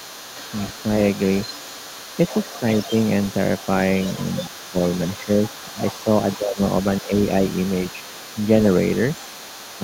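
Throughout the clip a faint second voice sits well below the talker: the other side's voice leaking through. The likely cause is far-end sound from the loudspeaker that the echo canceller failed to fully remove. Unlike room reverberation, it is separate speech, not a smeared copy of the talker.

Speech suppressed in double talk follows, likely from the canceller ducking everything while both sides talked. The talker's level briefly sinks at 2.60–2.64 s (slightly), 4.48–4.76 s (deeply), 5.25–5.29 s, 6.37–6.59 s (deeply) and 7.01–7.11 s. These are partial dips that coincide with the leaked voice, not clean silent dropouts.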